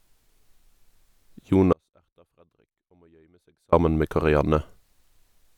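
The signal feeding this path was most likely interrupted for about two seconds while everything after the break stayed powered and open. That produces an audio dropout to a faint residue from 1.73 s to 3.73 s. The speech cuts off abruptly in mid-flow. The gap is not silent, because a faint leak of the signal remains far beneath its normal level, roughly 40 dB down. Then the full sound snaps back just as suddenly, with no fade at either edge.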